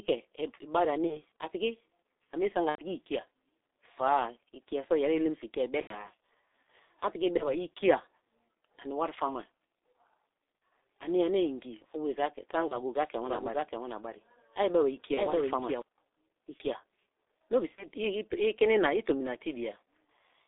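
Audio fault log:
throughout: G.723.1 codec. A 6.3 kbit/s coder with 30 ms frames confines the sound to about 300 Hz to 3.7 kHz, leaving it muffled and hoarse, with smeared consonants across the whole clip rather than in bursts.
1.07–1.22, 2.69–2.81, 5.81–6.08, 7.37–7.49, 10.58–10.61, 12.68–12.77, 15.14–15.20 and 17.75–17.87 s: VoIP packet loss concealed by the speech codec. This falls just before "a piki", just after "a mie sme" and just after "no be". The decoder fills the missing frames, 90 ms at 2.69 and 5.81 s and 30 ms elsewhere, with a fading continuation that stays weak briefly afterwards. In the two 90 ms gaps the fill is muted from the third lost frame.
13.26–15.82 s: doubled audio track. A second full-band copy, about 5 dB quieter, trails by roughly half a second and starts and stops abruptly with no decay or room colour, unlike an echo. Its likely cause is a slower second capture path or an out-of-step edit.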